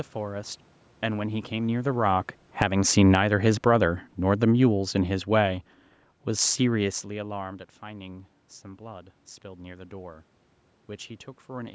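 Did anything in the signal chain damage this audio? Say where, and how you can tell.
Yes. Automatic gain falling, from 1.03 s to 2.77 s and again from 3.52 s to 5.67 s, sits in the call processing stage. In the first stretch the level sinks by about 8 dB over nearly two seconds, and the room background drops with it. That shared drop shows the gain stage was turning down after judging the input too loud. It is not the talker shifting position around 1.5 s. The second pass pulls everything down by a further 4 dB or so.

Automatic gain rising runs from 2.68 s to 3.52 s, also in the call processing chain, between the two downward moves. Sound and background swell together by about 3 dB over roughly 0.8 s. That is the control reading the now-quieter input as too low and pushing its gain back up before reversing again. This back-and-forth pumping, with the room noise moving in lockstep, marks a gain loop hunting rather than any change at the source.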